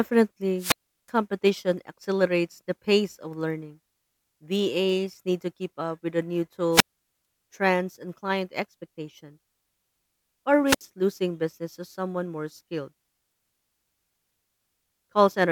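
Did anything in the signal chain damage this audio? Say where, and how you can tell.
Yes: a wireless microphone squelch dropout in the radio link. At 0.57–1.11 s, at 6.71–7.25 s after "up with the new", and at 10.65–10.82 s before "losing business to someone", hiss rises as the FM signal fades. The receiver then mutes for 365, 446 and 64 ms. Network packet loss gaps lack that hiss build-up.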